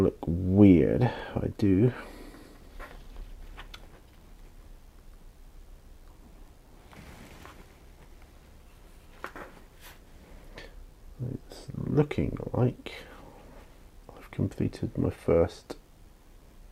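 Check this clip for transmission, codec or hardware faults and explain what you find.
Nothing audible points to a transmission, codec or hardware problem anywhere in the clip.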